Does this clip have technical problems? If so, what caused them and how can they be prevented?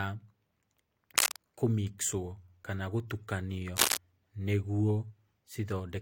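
Yes. Cable scratch noise appears twice in this speech: from 1.16 to 1.38 s, and from 3.76 to 3.97 s, right after "kana gũtukanio". Each burst is a dense, ragged rustle somewhat louder than the voice, most likely from a worn connector or cable whose contact resistance jumps as it moves. Unlike a single click or a steady hum, it is irregular and lasts a fifth of a second. Replacing worn cables and securing connectors prevents it.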